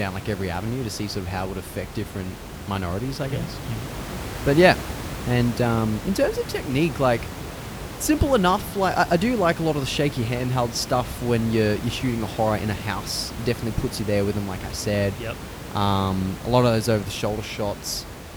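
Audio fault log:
No faults turn up anywhere in this speech recording. The room noise sits in the background, about 11 dB below the speech.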